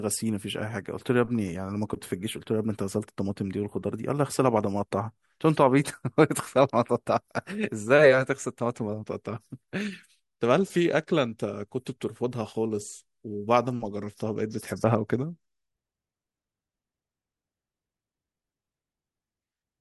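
A speech recording, and nothing is technically wrong with it.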